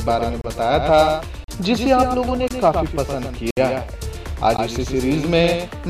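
From start to finish, every sound is followed by a flat, full-band repeat about a tenth of a second later and a few decibels quieter, with no decay or room colour. This doubled audio track likely comes from the same signal being captured twice, once through a slower path.

Hard-edged silent holes cut in at 0.41–0.44, 1.44–1.48, 2.48–2.51, 3.51–3.57 and 4.57 s, one per second and roughly 15 to 65 ms long. These are gaps between stream segments: each 1-second segment's timestamp lands slightly late, and the player fills the space with silence.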